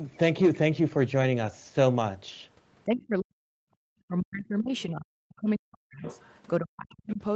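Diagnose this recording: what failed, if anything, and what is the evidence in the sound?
Call processing, speech suppressed in double talk: the voice sinks by around 40 dB at 2.85–3.66, 4.08–6.03 and 6.6–7.21 s, likely from the echo canceller ducking everything while both sides talk.

Call processing again, the other side's voice leaking through: a faint second voice, roughly 20 to 25 dB down, at 6.03–6.34 s and 7.1 s, likely residual loudspeaker echo the canceller missed.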